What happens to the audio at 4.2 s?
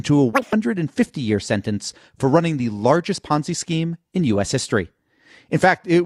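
Nothing goes wrong at 4.2 s; the speech carries on intact through that moment.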